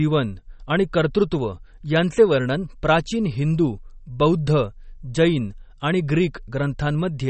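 Throughout the speech, nothing sounds above about 8.4 kHz, and weak detail warbles with a watery swirl, which is likely MP3 compression at a low bitrate of roughly 32 kbps. Plain low-pass filtering would dull the treble cleanly, without this frame-to-frame flicker.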